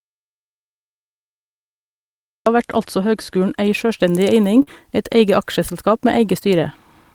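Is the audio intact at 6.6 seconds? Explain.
Yes, at 6.6 seconds the speech plays through intact, with no dropout, click, distortion or other fault at that moment.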